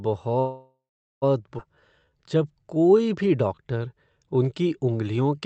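From 0.39 to 1.24 s there is a call audio freeze. The last sound is carried on as a fading buzz or hiss, then about 0.4 s of silence. Packets were likely held up and the jitter buffer ran dry. Speech then resumes where it stopped, with nothing lost.

At 1.58 to 1.60 s comes a skip ahead. Playback jumps forward almost seamlessly. Roughly half a second of speech is gone. Audio was dropped while later packets were already waiting, so the two sides join nearly directly.

From 1.75 to 5.38 s a jitter buffer slow-down follows. The receiver repeats single pitch periods to rebuild its reserve. Speech runs at 87% speed with unchanged pitch. Sounds are drawn out, and about 468 ms is added. The Opus call path limits the band to 8 kHz throughout.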